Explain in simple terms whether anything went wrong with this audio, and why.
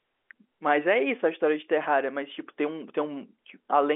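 Nothing went wrong with this audio; it just has the narrower, muffled sound of an ordinary phone line, which carries nothing above about 3.7 kHz.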